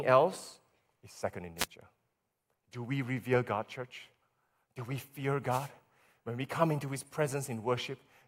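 Speech with two wireless microphone noise hits. A short burst of static is heard from 1.57 to 1.66 s, and a longer one from 5.49 to 5.69 s. Each time, the radio signal faded as reflections cancelled. Receiver noise rose.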